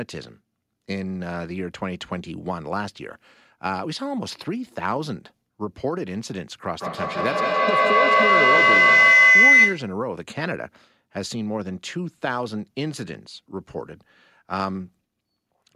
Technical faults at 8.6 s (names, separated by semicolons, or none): feedback howl